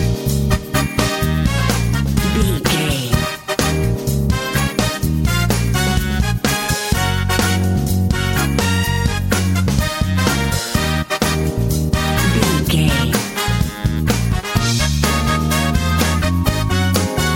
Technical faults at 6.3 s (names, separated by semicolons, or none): none